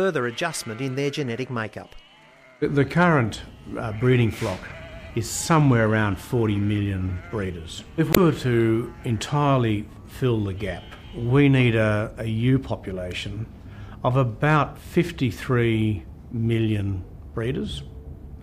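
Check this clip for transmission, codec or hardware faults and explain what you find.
There's one fault here, a burst of damaged data in the compressed stream from about 8.11 to 8.17 s. A short stretch of the encoded data is corrupt, so the decoder loses frame sync and hunts for the next valid header, leaving a quick glitch in the sound.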